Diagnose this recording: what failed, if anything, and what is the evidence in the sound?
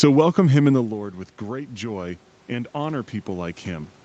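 Automatic gain rising, 0.71 to 3.99 s, after "welcome him in": call processing answered an input drop of about 14 dB by slowly adding about 6 dB, swelling speech and room noise together.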